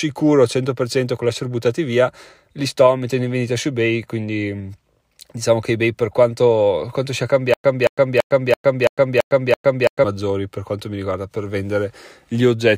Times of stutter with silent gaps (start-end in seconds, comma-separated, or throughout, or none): 7.54-10.04